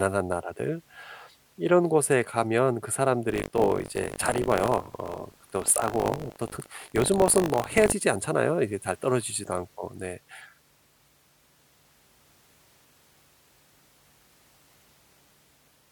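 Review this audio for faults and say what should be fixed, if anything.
Buffer tearing runs from 3.28 to 7.93 s: the speech takes on a robotic 50 Hz rattle. In each 20 ms period, roughly a tenth of the buffer plays audio from about 70 ms earlier, spliced in with hard joins. Unlike mains hum at the same frequency, the buzz exists only while speech is present and vanishes in pauses. Keep the writer pointer safely ahead of the hardware read position, resynchronising after any slip.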